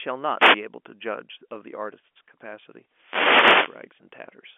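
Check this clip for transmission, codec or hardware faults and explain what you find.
Two wireless microphone noise hits affect the speech. They occur at 0.36 to 0.61 s and, longer, at 2.87 to 3.92 s. The analogue FM radio link fades as reflected paths cancel, so receiver noise surges into a swish of static over the voice. Unlike a digital dropout, the sound fills with noise rather than going silent. The narrow 250 Hz to 3.4 kHz telephone band comes from G.711 coding and is expected.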